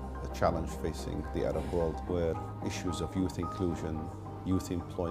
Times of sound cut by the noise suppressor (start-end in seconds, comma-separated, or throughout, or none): none